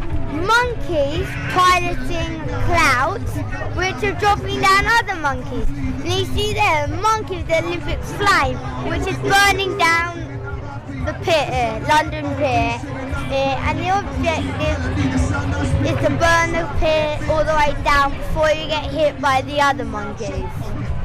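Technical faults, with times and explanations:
No technical faults are audible.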